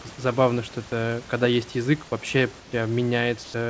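From 3.44 to 3.54 s, the background in a pause turns into comfort noise in place of the background. For those 100 ms, the room sound, sitting about 19 dB below the loud parts, loses its texture and becomes a flat, even hiss, about 2 dB quieter. The likely cause is discontinuous transmission: the sender stopped sending during the pause, and the receiver filled the gap with synthetic noise. The band stops near 8 kHz, as expected of a G.722 call path.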